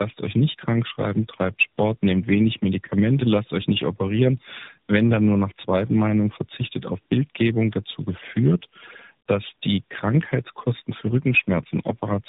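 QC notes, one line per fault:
Throughout: tandem speech coding. The audio sounds rough, muffled and warbly, with nothing above 3.8 kHz. This fits about three low-rate speech coders in a row, such as iLBC and AMR-NB, where each one re-encodes the previous coder's already degraded output.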